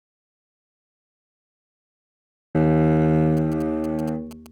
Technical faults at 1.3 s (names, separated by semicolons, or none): audio dropout to silence